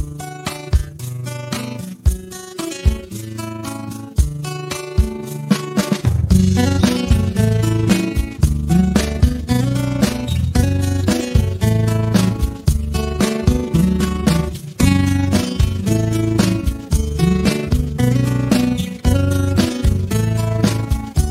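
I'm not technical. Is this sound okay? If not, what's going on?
No. Throughout the clip, the level pulses rapidly up and down, about thirty times a second, giving a fast, rough flutter. This is overlap-add ripple. The audio was processed in overlapping chunks and then stitched back together, but the overlaps don't blend evenly, so the loudness dips and swells once per chunk. The pulsing is steady and fairly strong from start to finish rather than appearing at particular moments.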